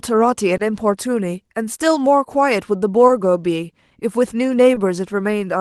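A sender clock running roughly 1% slow against the receiver's causes clock drift between sender and receiver in this speech clip, heard through a call path whose top end stops near 12 kHz. Because the sender delivers too little audio, the jitter buffer keeps draining, and the receiver repeatedly stretches or repeats short pieces to keep up, leaving small, unevenly spaced timing hiccups across the whole recording. On three occasions a late packet left the buffer empty, producing a short stall from a late packet at 0.57–0.60 s, 3.07–3.10 s and 4.74–4.77 s. Each time the receiver held the last sound for about 20 ms until the packet arrived, then resumed from the same point, so nothing is lost but the sound briefly drags with a faint buzz or dip.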